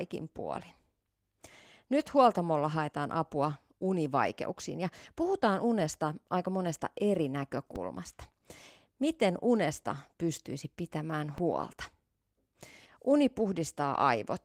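At 7.76 s a DC step shifts the waveform's zero line to a new offset, heard as a low thump, which holds until a second thump at 11.38 s when it steps back.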